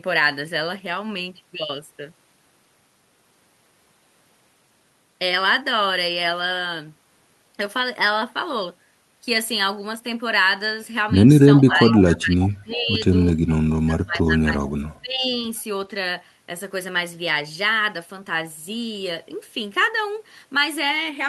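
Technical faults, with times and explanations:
11.62–13.05 s and 13.63–15.35 s, speech suppressed in double talk: the speech dips sharply in two stretches, the deeper one reaching a cut of roughly 30 dB. This is likely an echo canceller that heard both sides at once, could not tell its own talker from loudspeaker echo, and attenuated everything. On a waveform, the envelope collapses in uneven chunks. On a spectrogram, the energy thins out in blocky gaps.
11.72–12.02 s, 12.41–12.49 s and 13.49–13.55 s, echo leak: short, faint repeats of the speech come back 424 ms late. They are about 15 dB below the speech at first, then fade to about 25 dB below. The likely cause is a loudspeaker-side canceller that left residue in its microphone signal, so part of it was sent back. A spectrogram shows weak copies of earlier formant patterns offset by 424 ms. On the waveform they are small bursts.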